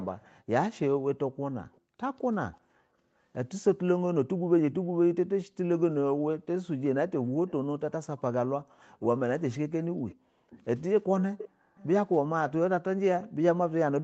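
A faint, delayed copy of the speech, trailing about 0.39 s behind, surfaces at 0–0.27, 1.72–1.8, 2.53–2.57, 7.48–7.52, 10.08–10.65, 11.38–11.86 (loudest here) and 13.22–13.28 s. This is echo leak, likely from a loudspeaker-side echo canceller letting residual pickup through.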